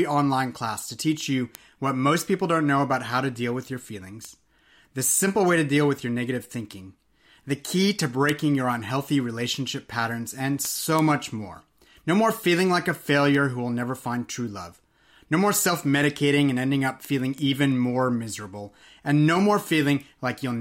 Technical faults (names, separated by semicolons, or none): word clock ticks